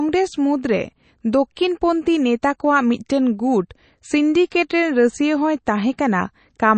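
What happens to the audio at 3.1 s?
At 3.09 s the codec spreads quantisation noise across a whole block, so noise meant for a sharp attack leaks about 10 ms ahead of it. That pre-echo is heard as a brief hiss before the onset, which sounds softened and smeared. This sits within MP3 compression present throughout, likely from encoding at around 32 kbps. The treble is cut off above 8.3 kHz and weak components flicker between frames, giving the speech a plainly audible watery, swirly quality.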